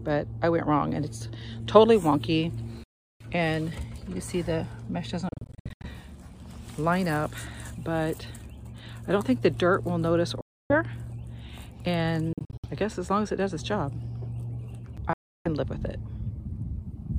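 The sound cuts to silence at 2.84–3.27 s, 5.29–5.87 s, 10.41–10.75 s, 12.33–12.65 s and 15.13–15.48 s, then resumes further along, as though it had played on. The second and fourth gaps are broken into short holes, with the longest runs of about 76 ms and 61 ms. This is likely a Bluetooth dropout, with packets arriving too late and being discarded.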